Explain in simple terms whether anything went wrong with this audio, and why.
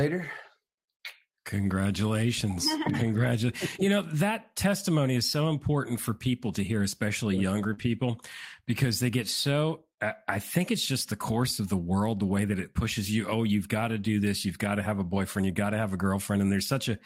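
Yes, two kinds of network trouble show up. The first is a short concealed packet loss from 7.73 to 7.79 s, right after "to hear especially younger": about 40 ms of the call arrived too late, so the receiver stretched the preceding sound to cover the hole. You hear a brief smear or wobble there.

Straight after, from 7.77 to 7.83 s, and again at 15.15 s after "got to have a", comes a lost packet rebuilt from error correction. The missing pieces were replaced by lower-quality backup copies carried in the next packet. That avoids silence, but those moments sound rougher and noisier. The first spot lasts about 40 ms, which fits two packets, and the second about 20 ms.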